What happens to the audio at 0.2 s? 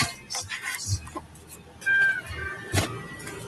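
The sound pumps and thins, held parts sinking by about 15 dB while attacks pass. A noise suppressor applied to music or sounds, active throughout, treats sustained content as noise.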